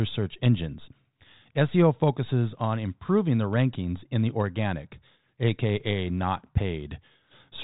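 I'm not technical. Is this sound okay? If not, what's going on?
Yes, nothing in this speech stood out as a problem when I listened to it.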